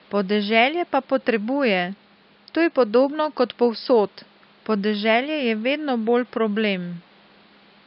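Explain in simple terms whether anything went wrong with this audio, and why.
Nothing went wrong with this audio; the faint background noise you can hear is simply the room the microphone was in, not a problem with the system.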